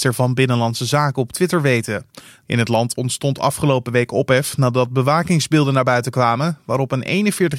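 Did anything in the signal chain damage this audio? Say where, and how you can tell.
No, nothing along the way seems to have hurt this speech, and there's no point where the signal chain gives itself away.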